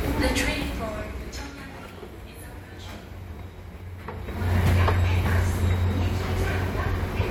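No technical faults can be heard in this recording of everyday sounds, and its timing and tonal balance hold steady throughout.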